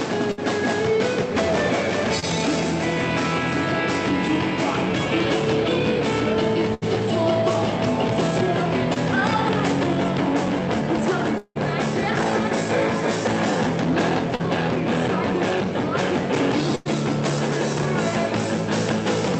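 A burst of packet loss at 0.31 to 0.40 s leaves about 60 ms of audio missing. The receiver extends the last sound for roughly 61 ms and fades it, so a held buzz or fading hiss bridges the hole before the audio jumps ahead.

Short concealed packet loss at 2.20 to 2.24 s drops about 20 ms. The gap is patched by continuing the preceding sound, about 26 ms of it, and blending back in, which gives a brief smear or wobble.

Another burst of packet loss at 6.74 to 6.84 s removes about 80 ms, covered by a fading continuation of about 74 ms.

Short concealed packet loss at 8.94 to 8.98 s again loses about 20 ms, heard as a quick wobble where roughly 22 ms of extended sound fills in.

At 11.38 to 11.57 s the sound turns into a decaying buzz or hiss for about 176 ms, then about 50 ms of silence, before resuming with roughly 180 ms gone. This is likely a long network dropout.

Short concealed packet loss at 14.35 to 14.41 s is longer, about 40 ms missing and 40 ms of concealment.

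A final burst of packet loss at 16.75 to 16.87 s drops about 100 ms behind a 99 ms fading hold.

Throughout, the call path's Opus coding limits the top end to about 8 kHz.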